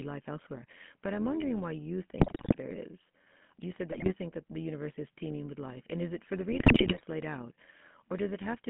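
Overlap-add ripple runs throughout: frames were recombined with an overlap that doesn't sum evenly, so the level swings about 6 dB at around 100 Hz, a metallic buzz with extra tones around each note. The GSM full-rate codec damage is also constant and plainly audible. Band-limiting to 150 Hz–3.4 kHz and a buzzy, gravelly texture fit a 13 kbps GSM full-rate coder. GSM bit errors corrupt the decoder's filter, pitch and gain values, producing squawks, pops and gargling. They occur at 2.18–2.57 s after "I'm wondering why you", at 3.90–4.13 s before "think that the universe", and at 6.52–7.03 s between "is it for the" and "laid out".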